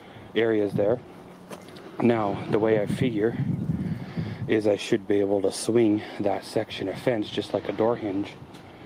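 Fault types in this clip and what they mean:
No faults can be heard.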